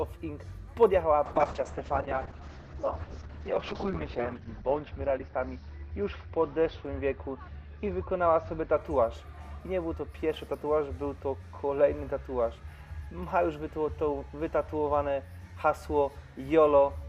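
From 1.27 s to 8.83 s, a call bitrate drop starves the encoder, consistent with a fall from 128 kbps to 7 kbps. The audio turns muffled and watery, worst for about 2.75 s. On a spectrogram, everything above 6 kHz is sheared off, against 20 kHz before.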